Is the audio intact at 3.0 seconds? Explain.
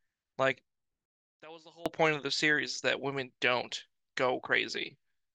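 Yes, the speech at 3.0 seconds plays through intact, with no dropout, glitch or other fault at that moment.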